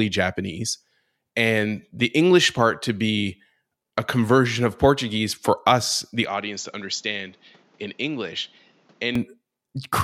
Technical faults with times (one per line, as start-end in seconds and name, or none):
6.25-9.15 input switched to a poorer device